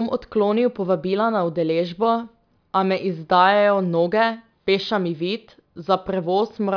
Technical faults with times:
none

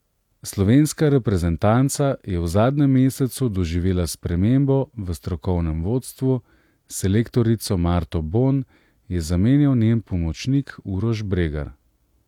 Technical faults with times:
none

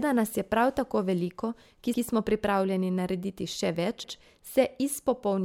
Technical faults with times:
1.94-2.04 overlapping chunks
4.04-4.14 overlapping chunks

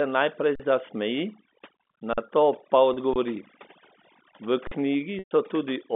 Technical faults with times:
0.00-5.96 overdone noise removal
0.55-0.60 underrun with held sample
2.13-2.18 underrun with held sample
2.94-2.97 packet loss with pitch repetition
3.14-3.16 underrun with held sample
4.67-4.71 underrun with held sample
5.19-5.31 packet loss with pitch repetition

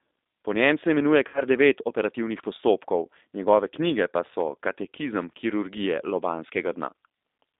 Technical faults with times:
0.00-7.60 G.729 codec
1.28-1.41 VoIP packet loss concealed by the speech codec

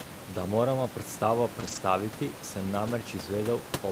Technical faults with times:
1.59-1.77 lost packet rebuilt from error correction
2.87-2.89 lost packet rebuilt from error correction

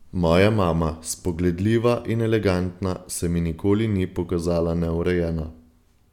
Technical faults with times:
none

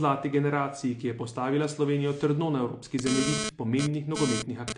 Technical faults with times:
0.00-4.77 AAC compression
2.99-4.73 GSM phone buzz

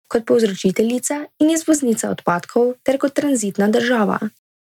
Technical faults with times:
1.72 dropped samples

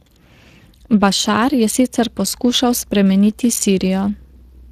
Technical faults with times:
0.00-4.72 Speex codec

